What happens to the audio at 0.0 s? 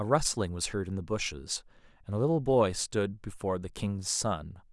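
Nothing goes wrong at 0.0 s; the audio is intact there with no audible fault.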